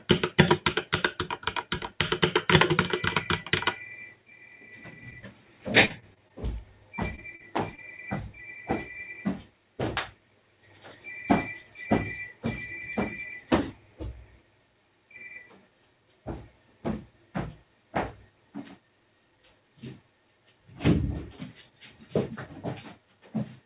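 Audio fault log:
5.10, 7.15, 7.35 and 7.75 s: short concealed packet loss. At each point a brief piece of the stream arrived too late to decode: about 20 ms at 5.10, 7.15 and 7.75 s, and about 40 ms at 7.35 s. The receiver covered each hole by extending the preceding sound, continuing its pitch or generating matching noise, then crossfading back. The result is a small smear or wobble. On a spectrogram, a short patch of stretched, overly smooth spectrum appears, confined below the 4 kHz ceiling of the call path.
5.85–6.31 s: repeated packet loss (robotic sound). Four separate dropouts fall within this half-second, about 100 ms missing in total, the longest about 45 ms. Roughly a fifth of the span is synthesized fill. Each patch continues the last sound just before the next one begins, so the audio turns choppy, with pieces missing. A spectrogram shows alternating blocks of frozen, smeared spectrum with seams between them. 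The waveform shows stretched patches with abrupt joins.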